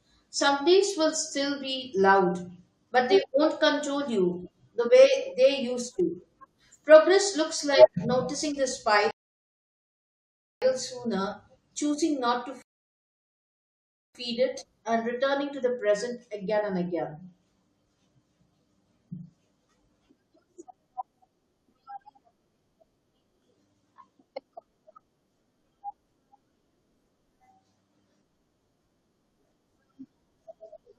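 Rebuffering stalls occur at 9.11 to 10.62 s, after "looks like noticing the", and at 12.62 to 14.15 s, after "sooner choosing not to". Each time the player drained its downloaded audio, fell silent for about 1.5 s, then resumed exactly where the speech had stopped, with "sooner choosing not to" and "it and returning to". Nothing is lost, but time is added.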